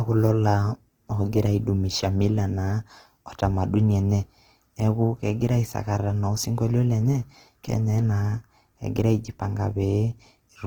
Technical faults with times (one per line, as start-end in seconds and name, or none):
0.00-10.67 Opus compression